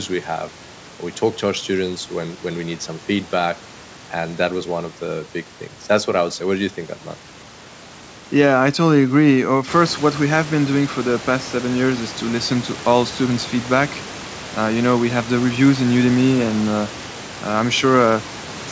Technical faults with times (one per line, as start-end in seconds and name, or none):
none